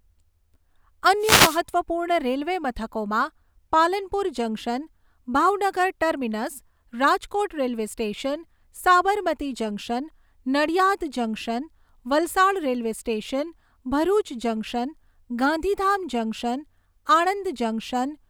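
Speech with a wireless microphone noise hit from 1.19 to 1.61 s: the FM radio link fades as reflections cancel, so receiver static swishes briefly over the voice.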